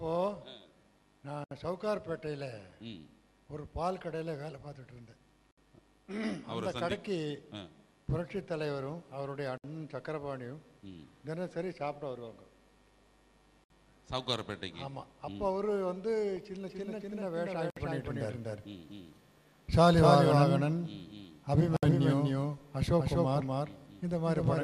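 The audio was encoded in separate pieces and joined without trimming, leaving a gap at a join of encoded pieces every 4 seconds: short silences open at 1.44, 5.51, 9.58, 13.64, 17.70 and 21.77 s, the first about 69 ms long and the rest about 64 ms. Each has smeared edges, and the sound resumes exactly where it broke off, because the encoder's start-up delay and padded last frame were kept at every seam. From 16.67 s to the end there is a doubled audio track, most likely a second capture through a slower path being mixed in. A full-band copy of the sound trails the original by roughly a third of a second at about the same level. It carries no decay or room colour, and it appears abruptly rather than fading in. Because it continues to the end, the two later gaps sit inside this doubled section.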